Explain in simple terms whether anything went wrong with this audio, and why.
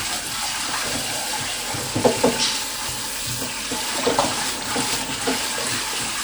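Something did go wrong, and it affects the whole recording from start to finish. The sound has a ringing, washed-out quality, and a hiss swells and fades along with it instead of staying steady. This is most likely WMA compression. That kind of audio shrinking slices sound into fairly long chunks and stores each one roughly, throwing away quiet detail. The leftover errors smear across each chunk, which is why clean edges turn blurry and the hiss seems to breathe.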